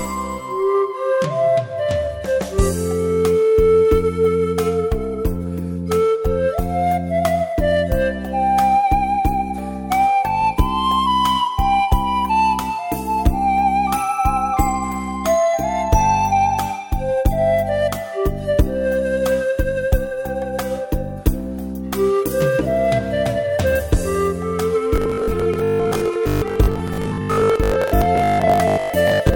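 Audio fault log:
24.96–29.35 s, robotic sound from repeated short buffers: a rigid, metallic 50 Hz buzz, likely from about half the audio being repeats, which fits 20 ms buffers.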